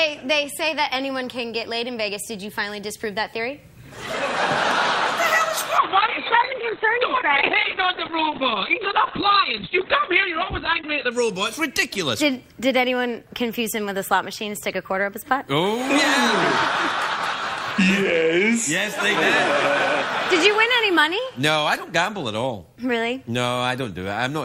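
From 5.8 s to 11.17 s the sound turns rough and muffled, with a watery, smeared texture and the upper range cut away above about 4 kHz, where before it reached about 20 kHz. It stays at its worst for about 5.3 s before clearing. This is a call bitrate drop: the estimated bandwidth fell, the encoder was given far fewer bits and coded coarsely, trimming the high frequencies. The sound points to a fall from about 96 kbps to around 7 kbps.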